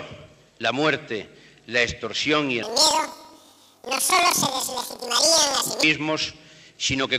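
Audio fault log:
2.63–5.86 s, planar audio read as interleaved: each block of left-then-right samples is read as alternating pairs, so each plays twice at double speed. The sound jumps an octave higher with a flutter near 23.4 Hz, fitting 2048-sample blocks of about 43 ms.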